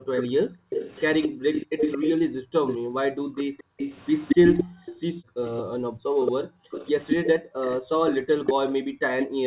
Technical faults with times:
0.00-9.46 background gated by the echo canceller
0.17-9.26 echo leak
8.14-8.46 speech suppressed in double talk

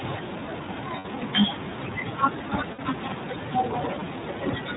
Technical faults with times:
0.00-4.76 iLBC codec
0.98-1.06 lost iLBC frames
2.72-2.80 lost iLBC frames

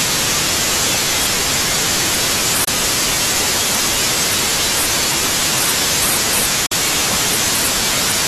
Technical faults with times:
2.64-2.68 Bluetooth dropout
6.66-6.73 Bluetooth dropout

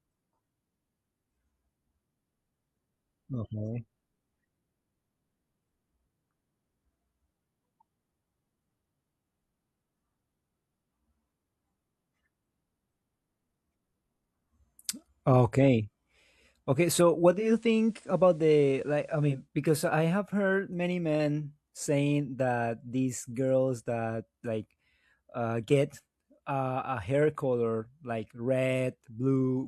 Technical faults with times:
17.26-19.49 digital radio blending to analogue

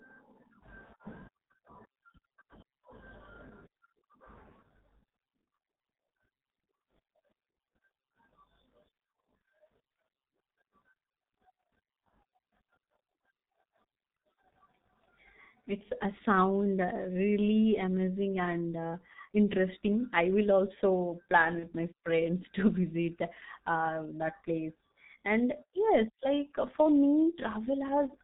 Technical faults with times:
0.00-28.23 G.723.1 codec
21.59-21.68 VoIP packet loss concealed by the speech codec

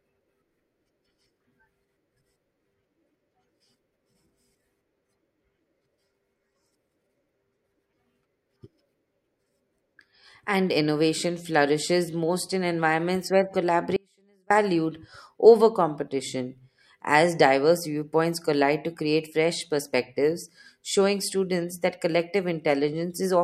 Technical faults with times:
13.96-14.50 audio dropout to a faint residue

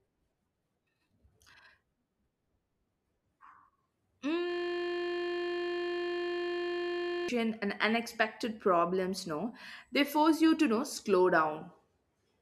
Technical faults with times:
4.50-7.29 system hang loop

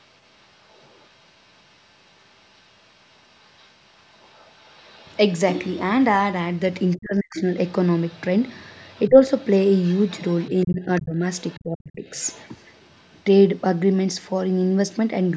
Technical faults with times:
0.00-5.17 other side's voice leaking through
6.96-13.61 other side's voice leaking through
6.97-7.48 speech suppressed in double talk
9.09-9.19 speech suppressed in double talk
10.65-12.06 speech suppressed in double talk

